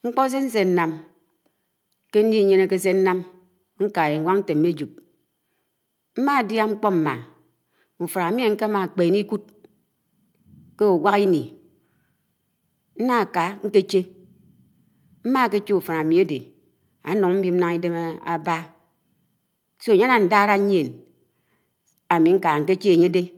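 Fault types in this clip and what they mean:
Clock drift between sender and receiver: the sending device's audio clock runs about 4 percent fast against the receiver's, so more audio arrives than can be played out in real time and the jitter buffer keeps filling. Throughout the clip this surplus must be shed, producing small timing hiccups at uneven intervals. On a waveform, syllable envelopes show occasional slight discontinuities; a spectrogram shows brief vertical seams where the time axis jumps.
Repeated timing corrections: from 0.2 s to 23.2 s the receiver keeps cutting short pieces out of the speech to stay in step, in effect playing it at 104 percent speed. Every edit removes audio, never adds it, and the edits fall at irregular spacing, giving a faintly unsteady, hurried tempo with tiny skips. A spectrogram shows harmonic tracks ending abruptly and resuming slightly offset, and a waveform shows small phase jumps at each splice.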